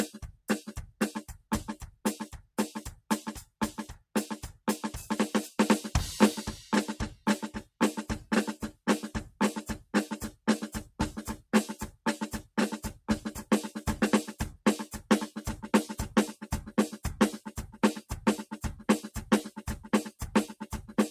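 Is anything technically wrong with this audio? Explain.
Yes. Between 0.14 and 0.49 s the music shows sound cut by the noise suppressor. Mistaking part of it for noise, the suppressor pulls it down by about 19 dB for roughly 150 ms, so it sinks in level. A waveform shows an envelope dip, and a spectrogram shows faded energy there.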